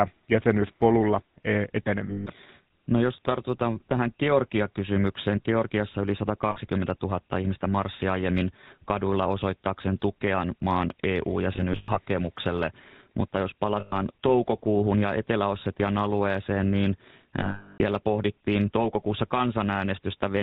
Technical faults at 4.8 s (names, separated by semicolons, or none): GSM full-rate codec